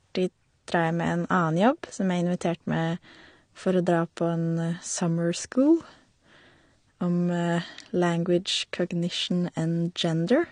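Speech, likely squeezed through low-bitrate AAC compression, around 32 kbps by the sound, leaves nothing above 9.7 kHz, so the clip stays dull and smeared, with audible warbling or fizz on sustained sounds and sibilants.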